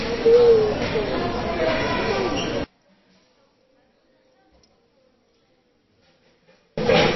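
From the first moment to the end, the sound carries plainly audible MP3 compression, likely from an encoder starved of bits at a rate that points to roughly 23 kbps. Nothing survives above 5.8 kHz, so the treble is cut flat. Weak frequency lines drop in and out between frames, giving a watery, swirling texture and smeared attacks. A spectrogram shows a hard ceiling at 5.8 kHz and speckled, flickering patches below it where components blink on and off.

From 2.64 s to 6.78 s the level collapses by about 36 dB, which points to one channel inverted, with the playback likely summed to mono. With one side's polarity reversed, everything shared between the channels cancels, leaving only a faint residue of their difference. On the waveform this looks like a sudden narrow sliver between two louder sections. On the spectrogram the energy across all frequencies fades to a dim wash for those four seconds.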